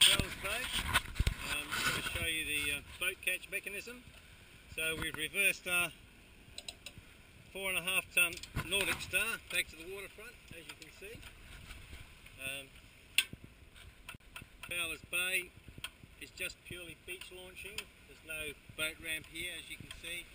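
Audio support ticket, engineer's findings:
CD stuck on one turn, 14.16–14.71 s: a 0.27 s chunk repeats twice with brief mutes at each jump. Scratch keeps knocking the laser back a track every rotation.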